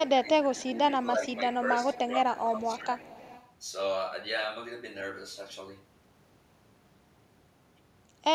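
From 0.08 to 1.33 s a faint delayed copy of the speech trails the talker by 0.3 s, sitting about 25 dB below it. This is an echo leak, likely from a far end on loudspeaker whose echo canceller let its microphone pickup through. Unlike room reverberation, which smears continuously, the copy arrives as a distinct repeat at a fixed lag. From 0.21 to 2.88 s the talker's level repeatedly dips, by around 10 dB at its deepest and for roughly 0.7 s in total. That is speech suppressed in double talk, likely because the canceller, hearing both sides at once, turned down the near talker along with the echo. The drops follow the overlap, whereas packet loss gives clean gaps at random points. From 1.93 to 3.52 s the echo leak returns at the same 0.3 s delay, now louder at about 20 dB under the speech. The unchanged lag marks it as the same echo path.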